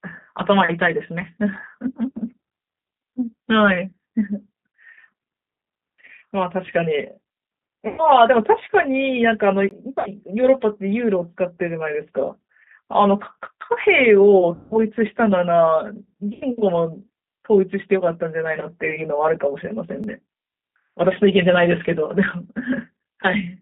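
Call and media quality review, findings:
G.729 codec, whole call. Band sits at roughly 200 Hz to 3.7 kHz with nothing above, and there's a plainly audible rough, slightly synthetic edge. That's the 8 kbit/s model at work: vocal-tract filter plus pitch predictor plus a handful of pulses per 5 ms subframe, so the fine texture gets rebuilt rather than carried through.

VoIP packet loss concealed by the speech codec, four spots: 7.88–8.05 s (100 ms lost), 9.99–10.10 s (60 ms), 14.55–14.80 s (160 ms, longest), 16.33–16.45 s (80 ms). Audio smears into a fading buzzy tail, and recovery lags a bit past each hole. The decoder extrapolates the last pitch and filter while ramping gain down. Loss amounts fit 20 ms packets.

Block of digital silence, two hits. 9.69–9.71 s: a 20 ms hard dropout, heard as a short hole. 20.04 s: about 4 ms, just a tick. Likely output buffer not filled in time, so samples went to zero with no fade.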